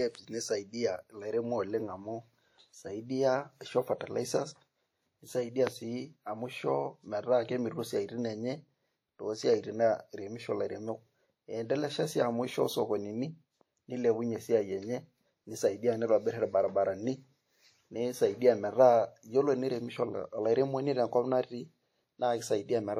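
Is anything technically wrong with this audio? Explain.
Yes. Throughout the speech there is plainly audible transform-codec damage, most likely WMA compression. At a rate that fits roughly 48 kbps, quantisation noise from long blocks smears over tens of milliseconds and weak spectral lines are zeroed, so the sound rings and turns washy, with hiss that swells and falls with the signal. A spectrogram shows blotchy, gappy upper bands, pre-echo smudges before onsets, and nothing above about 19.9 kHz.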